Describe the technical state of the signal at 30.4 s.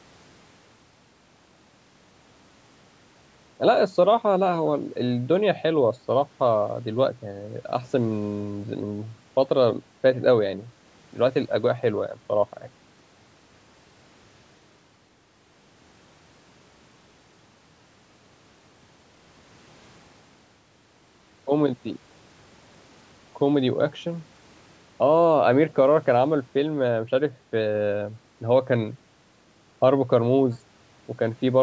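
At 30.4 s the signal is intact, with only the normal band limiting of call microphone processing audible, which trims the lowest bass and leaves nothing above 8 kHz.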